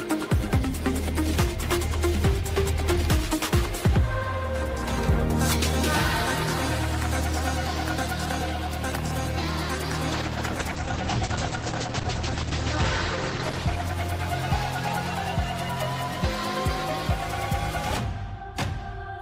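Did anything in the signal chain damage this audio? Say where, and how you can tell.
Yes, a call bitrate drop at 10.14–14.77 s: falling bandwidth pushed the codec from 32 to 10 kbps, giving coarse, muffled audio cut off at 8 kHz.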